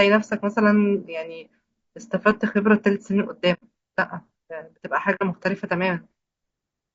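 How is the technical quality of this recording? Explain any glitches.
The technical quality is poor. The speech sounds rough and grainy throughout, with two brief dropouts.

Low-delay AAC compression is the likely cause of the graininess. Short frames resolve harmonics poorly, and the damage suggests a bitrate near 32 kbps.

AAC frame loss with muting occurs at 3.53 to 3.63 s and at 5.15 to 5.23 s. The decoder zeroed the missing frames, leaving soft-edged gaps.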